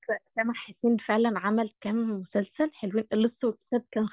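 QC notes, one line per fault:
Nothing to flag here, this speech has no faults to note.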